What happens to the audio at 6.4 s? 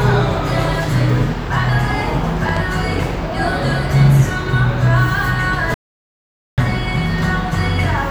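At 6.4 s the audio is in the middle of an audio dropout to silence running from 5.74 to 6.58 s. The input feeding the recorder was likely cut off for that stretch, by a disconnect, a failed link or a stray mute, while writing carried on with silence. The sound stops abruptly, leaving silence with no background at all for about 0.84 s, then resumes mid-flow. Whatever happened in that gap is lost.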